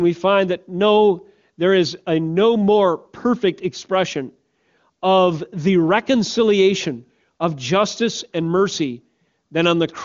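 No technical faults can be heard in the speech, which has the band-limited character of the AMR wideband (HD Voice) codec, with nothing above about 7.4 kHz and a clear, smooth quality that points to one of its higher rates, around 24 kbit/s.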